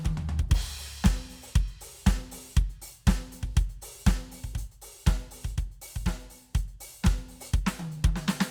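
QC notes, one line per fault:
No faults heard in the music.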